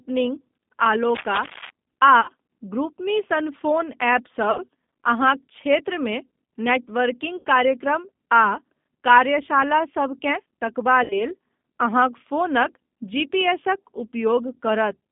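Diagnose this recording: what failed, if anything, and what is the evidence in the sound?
Rough, slightly synthetic speech confined to a telephone band of about 150 Hz to 3.6 kHz: the G.729 codec at 8 kbit/s, rebuilding the speech from a vocal tract filter, a pitch predictor and sparse pulses.

Brief buzzy or noisy, fading smears at 2.21–2.31 s (just before "ग्रुपमी सन"), 4.51–4.59 s, 7.37–7.45 s and 11.04–11.23 s (right after "कार्यशालासभ केँ तकबा"): VoIP packet loss concealed by the speech codec, which extrapolates its last frame while lowering the gain.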